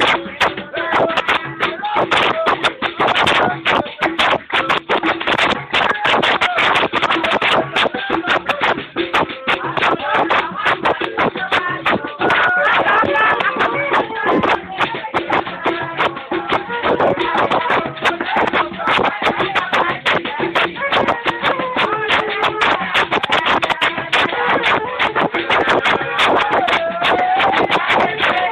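No technical faults can be heard anywhere here.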